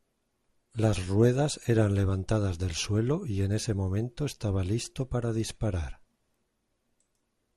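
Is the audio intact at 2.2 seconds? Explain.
No. DAB burbling hits at 2.24 s, between "ruedas eran" and "del suelo y en". A small number of bit errors in the broadcast stream got past error correction into the MP2 audio data. The corrupted samples put short blips of noise into single sub-bands, which fits three frames being hit. It is heard as a few brief watery blips over the speech.

Running through this moment as well is the dull, granular gurgle of MP2 compression, likely at around 80 kbps. MPEG Layer II divides the signal into 32 sub-bands and shares out too few bits among them, so upper bands drop out and flicker while the remaining ones are coarsely quantised. The result is a muffled, grainy sound under the speech.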